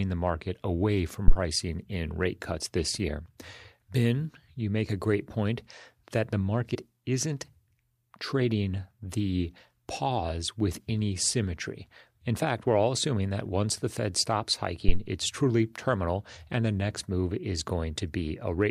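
A phantom power thump at 1.28 to 1.35 s, right after "the market away from" and before "in rate cuts this", is a supply being switched on a live input. The sudden voltage step passes through the input's coupling capacitors as a low, dull knock. This one dies away in about 15 ms. A second phantom power thump at 14.89 to 15.03 s, just before "it's truly terminal and", is longer, with a decay of about 33 ms.

Damaged data in the compressed stream at 6.74 to 6.76 s, just after "great point that the", comes from corrupted bytes in the encoded file. The decoder cannot read those frames correctly and loses its place until it finds the next valid frame header. The result is a brief synthetic blip lasting about 22 ms.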